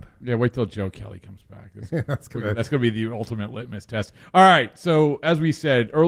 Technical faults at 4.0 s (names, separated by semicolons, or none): none